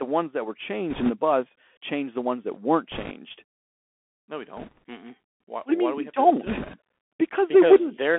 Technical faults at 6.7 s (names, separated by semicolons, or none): Bluetooth CVSD headset codec; bit errors on a Bluetooth voice link